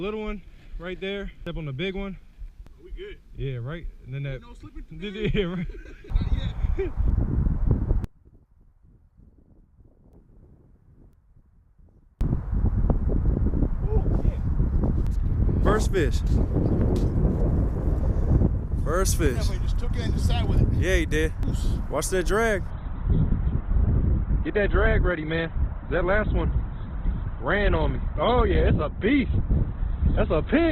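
From 8.04 to 12.21 s, one channel inverted in polarity is the likely cause: summed to mono, the shared content cancels, and the sound falls by about 32 dB to a faint residue. From 22.70 s to the end, the adaptive stream switched to a lower bitrate, consistent with Opus dropping from 64 to 12 kbit/s: quality changes abruptly without a gap, and nothing remains above 4.2 kHz.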